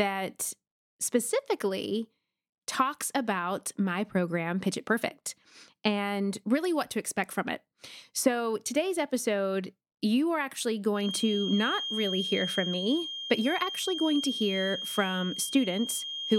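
Speech, with a thin whistle at a single pitch of 3.2 kHz entering at 10.91 s and continuing to the end at 16.39 s, sitting a little below the speech and slowly swelling and fading. This feedback whistle likely comes from a loudspeaker-to-microphone loop poised just short of howling.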